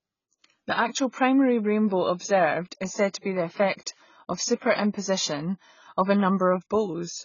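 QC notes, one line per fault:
throughout, AAC compression: speech stops dead above 7 kHz, with heavy warbling, fizzy sibilants unlike a clean low-pass; likely AAC-LC, fitting roughly 16 kbps.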